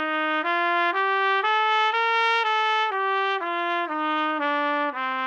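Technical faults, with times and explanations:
No technical faults can be heard in this audio.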